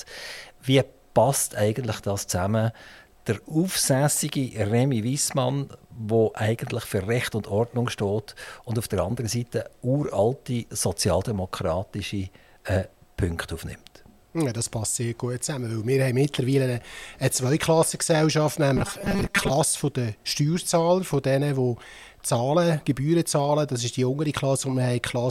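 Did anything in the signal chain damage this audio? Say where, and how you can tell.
Yes. From 18.77 to 19.52 s the sound turns into a rigid, metallic buzz at 200 Hz. That is robotic sound from repeated short buffers. Each 5 ms stretch is replayed while real audio is skipped, so about half is repeated filler. The likely stage is a starved driver buffer.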